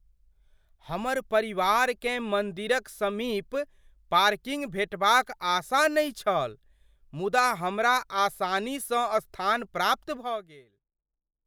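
No technical faults can be heard in this speech clip.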